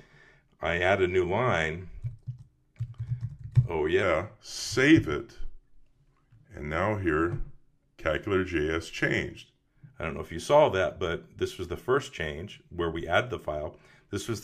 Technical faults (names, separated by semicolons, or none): wrong sample rate